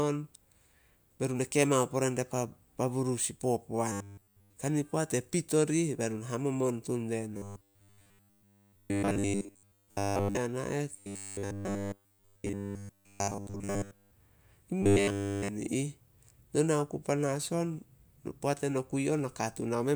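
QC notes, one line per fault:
3.92–4.56 s, 7.37–10.37 s, 10.94–14.11 s and 14.82–15.48 s: robotic sound from repeated short buffers. In each span the speech turns into a rigid metallic buzz locked at 100 Hz that only loosely follows the syllables, with essentially none of the original signal coming through. A steady 100 Hz pitch fits a 10 ms block being looped back to back, likely because fresh audio arrived too slowly and playback kept reusing the last buffer.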